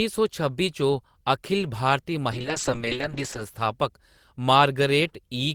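At 2.32 s, just after "अखिल भारती", the speech goes through a call bitrate drop that lasts until 3.48 s. The connection's bandwidth estimate fell, and the encoder was pushed from 32 kbps down to 6 kbps, holding at that floor for about 1.1 s. At that rate the codec quantises coarsely and discards the upper band, so the voice turns muffled and watery, with a rough, smeared texture. Clarity returns once the bitrate recovers.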